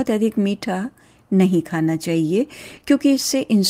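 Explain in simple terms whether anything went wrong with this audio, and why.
Short concealed packet loss at 2.75 s and 2.79 s: two 20 ms chunks arrived too late, and the receiver patched them by extending the preceding sound, leaving a brief smear.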